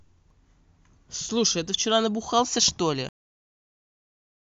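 A short speech clip with two faults. At 0.30 to 0.34 s there is damaged data in a compressed stream: corrupted bytes make the decoder misread a frame, lose sync and hunt for the next valid header. The result is a brief glitch of about 30 ms. On a spectrogram it appears as a narrow vertical smear of broadband or oddly banded energy that breaks the surrounding harmonic pattern, and on the waveform as a short irregular burst. The second fault is a cut-off end at 3.09 s, where the final buffers were never written or played, so the speech stops mid-sound instead of finishing. The waveform drops abruptly to a flat line of digital silence that lasts to the end, with no decay tail. On the spectrogram every frequency band ends at the same vertical edge, followed by blank black space.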